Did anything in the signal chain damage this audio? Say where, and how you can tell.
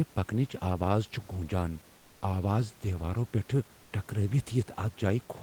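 Yes, at the codec stage: from 3.83 to 3.91 s, an 80 ms stretch of comfort noise in place of the background. The room noise, sitting about 30 dB below the speech, gives way to a smoother, featureless hiss about 2 dB quieter. On a spectrogram the textured background turns into an even, uniform wash, and the waveform envelope flattens. This is likely Opus DTX, where the encoder stops sending during silence and the decoder synthesises shaped noise to fill the gap.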